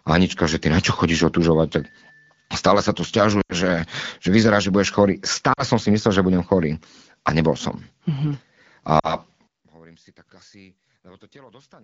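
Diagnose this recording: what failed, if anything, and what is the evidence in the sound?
Lost AMR speech frames occur at 3.41 to 3.54 s, 5.53 to 5.63 s (just before "som si") and 8.99 to 9.15 s. These are radio-link errors. Each gap is heard as a brief smeared, fading stretch as the AMR-WB decoder repeats its last good pitch and vocal tract settings at falling gain. The first gap is about 80 ms, which fits four 20 ms frames. The others fit two.

One channel inverted is the likely cause of the collapse from 9.47 s to the end, when the level drops by about 31 dB and centred sound almost disappears. This points to reversed polarity on one stereo leg, perhaps in wiring or playback routing. Summing to mono then cancels everything common to both channels.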